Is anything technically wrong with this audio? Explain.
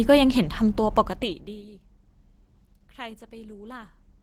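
Yes. Throughout the speech, Opus compression is audible: grainy, hoarse, muffled texture that likely comes from Opus's hybrid speech mode at a rate near 16 kbps. The bands are filled rather than left empty, so it sounds rough instead of swirling like MP3.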